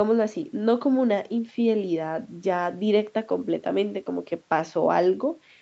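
No technical faults are audible in this speech, whose content stops at 8 kHz as expected from a call's microphone processing and Opus coding, with the bottom of the bass range trimmed by the usual high-pass filter.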